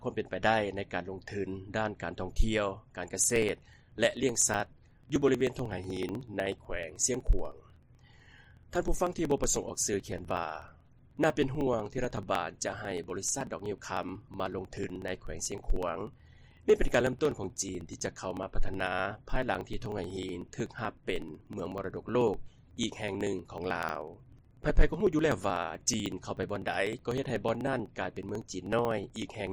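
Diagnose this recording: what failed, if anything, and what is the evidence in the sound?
Periodic USB or driver dropouts, 3.24 to 29.47 s: ticks every 62 ms, each where about 2 ms is skipped because the driver stage is periodically blocked.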